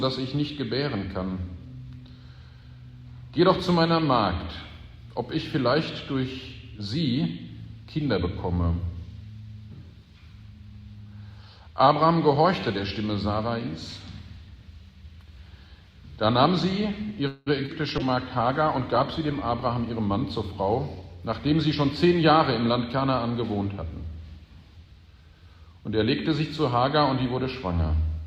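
A call audio freeze at 17.27 to 17.48 s holds the last sound as a fading buzz or hiss for about 190 ms, likely because delayed packets let the jitter buffer run dry; the audio then resumes where it stopped, inserting a gap without losing anything. A skip ahead follows at 17.66 to 17.70 s, where playback jumps forward with only a very brief fill, dropping roughly 70 ms of audio and joining the two sides almost directly as the receiver sheds built-up delay. A call bitrate drop runs from 17.99 to 20.52 s, with the encoder cut from 64 kbps to 23 kbps and held at its lowest for about 1.56 s, so the sound turns coarser, rougher and duller as high frequencies are trimmed until the bitrate recovers. A jitter buffer speed-up overlaps it from 19.50 to 21.03 s, with the receiver removing short pitch-period slices to catch up and playing at about 109% speed, so around 150 ms vanishes and the audio sounds hurried at unchanged pitch.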